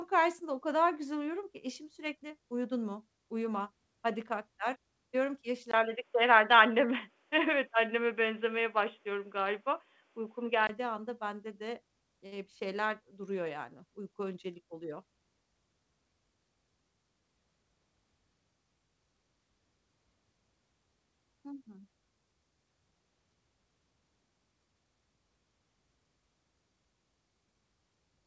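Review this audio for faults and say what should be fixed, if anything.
From 5.71 s, right after "ki yaş", the speech goes dull and boxy until 10.69 s, just before "anda bende de eee". There's a 20 ms gap at 5.71 s, and nothing above 3.6 kHz comes through, versus the 8 kHz band the call path carries elsewhere. You'll also hear a level shift of about 5 dB and a new background noise floor roughly 45 dB below the speech. That all points to the input having likely switched to a poorer device, such as another mic or a headset's call profile. Pin the input device for the whole session so the system can't hop to a different mic or headset profile mid-recording.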